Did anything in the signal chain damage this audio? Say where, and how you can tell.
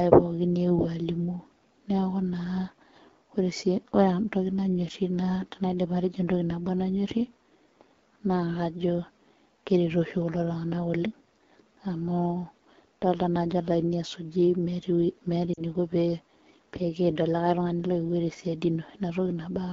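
Yes. At the codec stage, the whole clip carries AMR wideband (HD Voice) coding at a low rate: speech sounds rough and raspy throughout, which fits AMR-WB at about 8.85 kbit/s. The pulse-driven vocal tract model can't represent the voice cleanly at that rate, and the top band above 6.4 kHz is filled with shaped noise.

At the network or radio stage, lost AMR speech frames cause a brief drop toward near silence from 15.54 to 15.61 s, a 40 ms gap that fits two lost 20 ms frames. The decoder repeated the last good pitch and vocal tract settings at falling gain, and the voice returns weak or rough for a moment.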